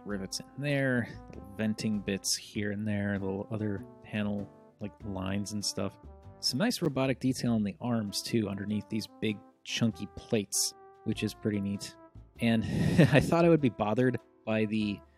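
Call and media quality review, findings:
Gap between stream segments at 6.85 s: a hard-edged silent hole of about 8 ms. Probable component: segmenter or packager timestamps, consistent with 2 s segments. Mechanism: adjacent segment timestamps leave about 7 ms uncovered, and the player pads it with silence. This differs from a packet-loss dropout because nothing is missing. The sound resumes exactly where it stopped, just later, with no concealment smear, repetition or fade at either edge. It occurs only once.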